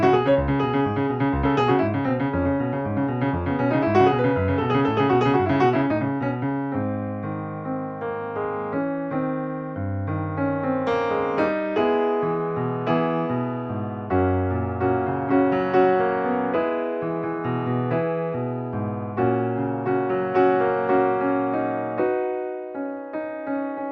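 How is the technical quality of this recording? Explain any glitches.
No glitches turn up anywhere in the recording. There is nothing to explain, since every part of it holds together without a break or disturbance.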